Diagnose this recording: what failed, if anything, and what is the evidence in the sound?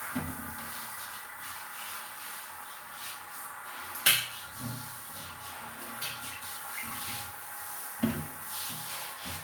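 Nothing here has failed: the sounds come through at every stage from capture to playback without anything in them pointing to a problem.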